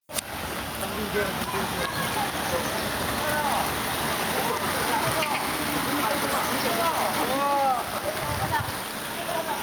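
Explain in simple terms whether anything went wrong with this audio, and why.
Something did go wrong here, and it lasts the whole clip. The problem is called gain pumping. Every time a loud sound arrives, the overall level drops sharply. Loud and soft moments end up too close together, so everything sounds squashed. The likely cause is a recording level set far too high, with a fast limiter pulling it down on every loud sound.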